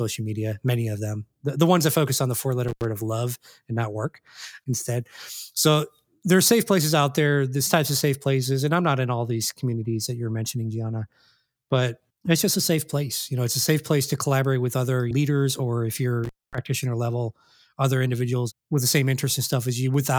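At 2.68 s, after "focus on the four", and at 16.24 s, after "other leaders or if", an intermittent contact briefly opens the line. Speech drops out for 81 ms and 236 ms, with crackle at both edges. The waveform shows near-flat gaps framed by spikes, and the spectrogram shows vertical broadband lines around nearly empty bands.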